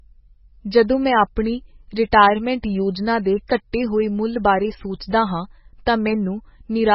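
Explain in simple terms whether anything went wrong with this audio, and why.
Something did go wrong, and it runs the whole way through the speech. Everything above about 5.6 kHz is simply missing, so the voice sounds dull and muffled, and the heavy damage gives it a watery, swirly quality. That's most likely MP3 compression squeezed very hard: short on space, the encoder chops off the treble and keeps dropping quieter bits of sound in and out from one moment to the next.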